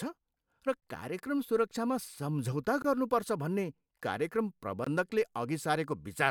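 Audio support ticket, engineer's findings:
Gap between chunks in speech. Hard-edged holes at 0.80–0.82 s, 2.82–2.84 s and 4.84–4.87 s. Each about 21 ms, recurring every 2 s. Chunked transport or playback. Silence inserted at each chunk join, probably padding or a late chunk start. No audio missing.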